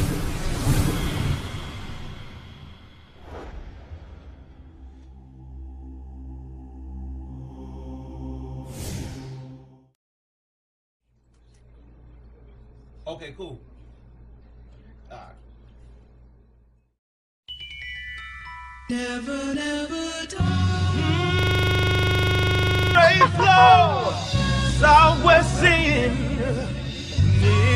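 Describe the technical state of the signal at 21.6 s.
At 21.6 s the signal is caught in a system hang loop, running from 21.39 s to 22.95 s. The computer or its audio driver stalled, while the sound hardware kept replaying whatever was left in its ring buffer. A single 40 ms slice repeats exactly, dozens of times over. At 25 repeats per second, it sounds like a harsh, rapid stutter bordering on a buzz. The loop length points to a buffer of about 40 ms.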